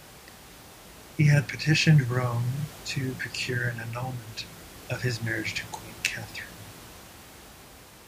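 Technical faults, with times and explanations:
The speech signal is intact, with only the room's own background noise audible at about 20 dB below the speech.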